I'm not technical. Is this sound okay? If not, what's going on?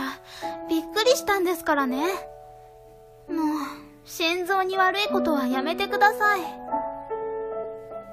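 No. Throughout, there is sample clock jitter: the converter's timing wobbles by a microsecond or two, so each sample is taken slightly early or late. That adds a faint hiss or roughness that grows on loud, bright passages and disappears in quiet moments.

At about 7.63 s there is damaged data in a compressed stream. A tiny stretch of the file is corrupted, so the decoder loses its place and searches for the next readable block. You hear this as a brief chirp or blip.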